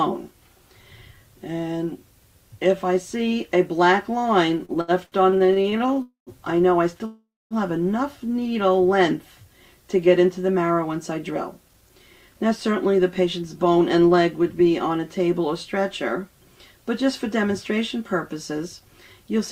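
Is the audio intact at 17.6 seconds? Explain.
Yes, the audio is intact at 17.6 seconds, with no dropout, click, distortion or other fault at that moment.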